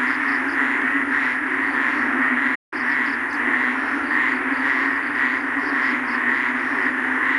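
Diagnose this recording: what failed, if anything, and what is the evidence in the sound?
At 2.55 s the sound cuts out abruptly in mid-flow and the output stays silent until 2.73 s, a gap of about 0.17 s, before the audio resumes. This is a playback stall at the playback stage. The hard drop to silence and the restart point to the player's output going empty. The likely cause is the player running short of data or its output thread being held up, so nothing reached the device until it caught up.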